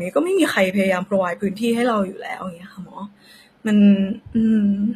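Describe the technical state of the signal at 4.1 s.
HE-AAC compression is at work at 4.1 s, as across the whole clip: the speech's treble sounds rebuilt by copying lower bands upward, so s sounds turn gritty and lispy and nothing survives above 14.9 kHz, likely from a low bitrate near 24 kbps.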